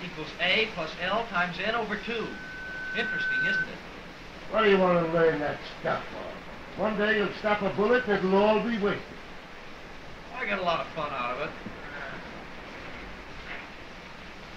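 At 1.92 s a loudspeaker feedback squeal starts: the mic is hearing its own speaker, and around 1.5 kHz the loop gain tops one. The tone swells over roughly a second and a half, ends up a few dB above the programme, then cuts at 3.70 s.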